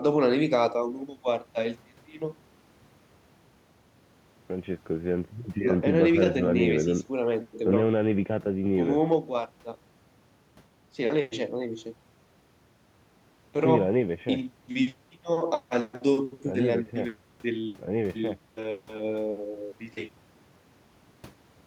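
No technical faults can be heard anywhere in this speech recording. There is nothing here to place on the timeline.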